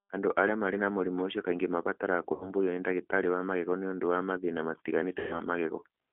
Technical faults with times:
0.00-6.12 G.729 codec
2.34-2.51 VoIP packet loss concealed by the speech codec
5.19-5.40 VoIP packet loss concealed by the speech codec

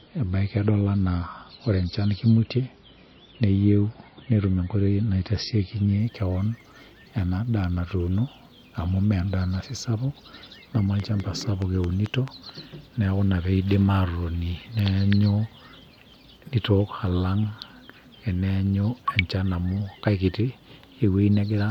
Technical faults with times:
0.00-6.00 adaptive stream starting at a low bitrate
11.00-12.29 train of clicks

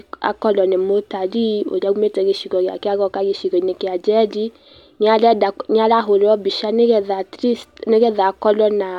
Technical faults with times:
none

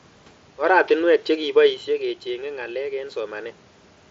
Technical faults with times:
1.27-3.64 automatic gain rising

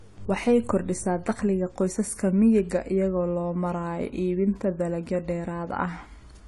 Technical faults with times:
0.00-6.47 AAC compression

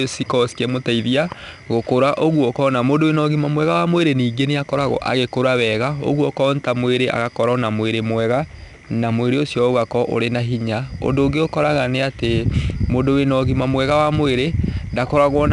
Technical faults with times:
0.00-15.52 4-bit ADPCM compression

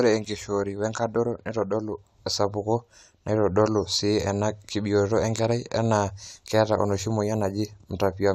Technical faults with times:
none

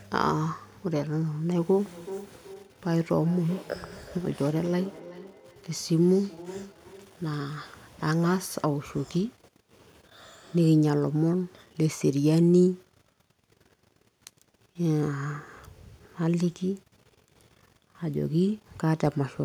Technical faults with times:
1.50-7.53 feedback echo between two devices

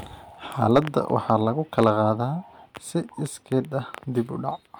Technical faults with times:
0.72-1.34 hard clipping
1.78-1.90 hard clipping

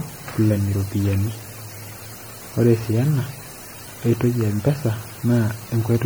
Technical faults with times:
0.00-6.05 generation loss

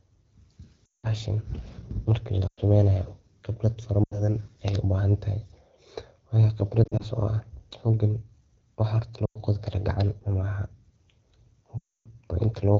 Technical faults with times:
0.85-1.08 lost AMR speech frames
2.47-2.61 lost AMR speech frames
4.04-4.29 lost AMR speech frames
6.84-7.04 lost AMR speech frames
9.25-9.38 lost AMR speech frames
11.78-12.08 lost AMR speech frames

